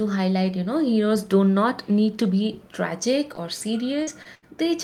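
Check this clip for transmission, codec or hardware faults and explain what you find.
There are transmission faults here, all packet loss, and they pile up near the end of this speech clip.

First, three spots of short concealed packet loss: 3.35 to 3.39 s, just after "need to be tragic", then 4.03 to 4.09 s and 4.23 to 4.27 s. Each time a sliver of audio, about 20 ms, 40 ms and 20 ms, never arrived in time, so the receiver papered over the hole by extending what it last had and then blending back. You hear brief smears or little wobbles, and a short sound can just disappear.

Then there's a burst of packet loss from 4.35 to 4.44 s, right on the heels of the last short one. Here about 80 ms went missing in one go. The decoder kept stretching the previous sound while turning it down, which gives a held buzz or fading hiss for roughly 76 ms, and when the real audio comes back it picks up further along, with that stretch simply gone.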